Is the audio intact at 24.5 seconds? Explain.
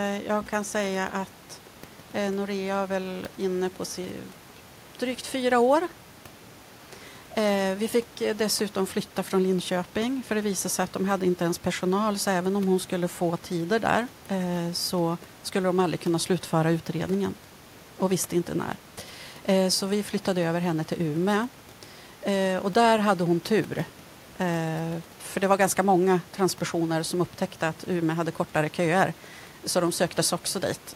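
Yes, the audio is intact at 24.5 seconds, with no audible fault at that moment.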